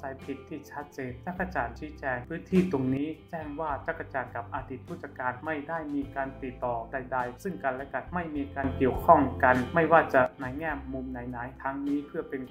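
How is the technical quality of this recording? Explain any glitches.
The recording has two level faults. A sudden gain jump occurs from 2.51 to 2.97 s, where the level rises by about 9 dB, and again from 8.64 to 10.26 s, by about 10 dB. In both, the sound and the background noise step up together at the start and drop back together at the end. The likely cause is a gain setting applied instantly between adjacent samples, with no ramp to smooth the change.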